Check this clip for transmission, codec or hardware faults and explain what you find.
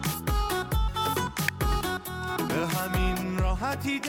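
One fault stands out. At 1.48 s a single sharp, fairly loud snap sits on top of the sound, likely an electrical switching spike from a nearby switch or discharge arcing into the line.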